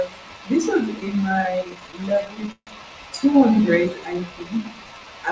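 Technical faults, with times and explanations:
1.00 to 2.69 s, repeated stalls (stutter): the packets kept turning up late, so the buffer ran dry again and again, 27 times here. Each gap got filled by stretching the last bit of sound, the longest about 150 ms. That adds up to roughly a quarter of this stretch. Nothing's actually lost, but the speech drags and stutters.
3.51 to 5.06 s, jitter buffer slow-down: the buffer was building back up a reserve, so it repeated single pitch periods and bits of pauses. That adds about 190 ms and plays the speech at around 88% speed, same pitch, so sounds come out drawn out.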